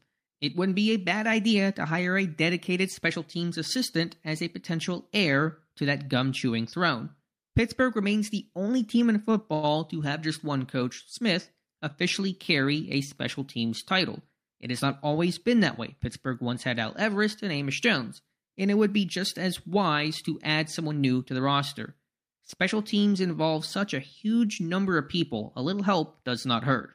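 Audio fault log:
9.54 to 9.65 s: short stall from a late packet. A packet arrived late and the jitter buffer ran dry, so the receiver held the last sound for about 91 ms, then resumed from the same point. Nothing is lost, but one sound is stretched, with a slight buzz or dip.
20.48 to 21.40 s and 25.58 to 26.23 s: jitter buffer speed-up. The buffer held excess audio, so the receiver cut repeated pitch-period-length slices, about 70 ms and then about 50 ms in total. The speech runs 8% and 7% fast at unchanged pitch and sounds hurried.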